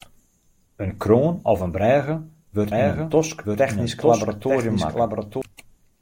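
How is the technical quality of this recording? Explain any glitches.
There's one real glitch here, a doubled audio track. From about 2.72 s to 5.42 s, a second full-band copy of the speech runs roughly a second behind, a few dB quieter, with no room tail. It likely comes from a slower duplicate capture path, and it cuts in and out abruptly.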